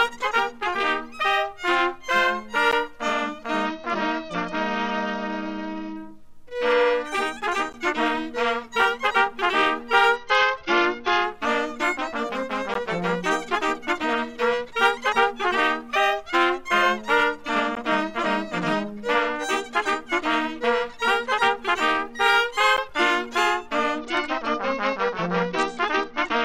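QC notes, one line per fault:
2.71, 7.73, 12.74, 17.75, 22.77 s: gap between chunks. A hole of about 13 ms with hard edges recurs every 5.0 s, where late-starting or padded chunks leave silence at each join. Nothing is missing around it, and the strict spacing separates it from random dropouts.
3.66–5.97 s, 10.16–11.24 s, 23.99–26.45 s: Bluetooth SBC bit pool drop. The treble dulls and gritty noise rises, fitting a bit pool falling from 28 to 9, near 78 kbps. The top sub-bands starve and the rest coarsen. Unlike packet loss, the sound continues without gaps.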